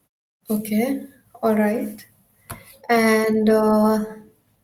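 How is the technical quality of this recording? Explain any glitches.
No glitches or technical faults can be heard here.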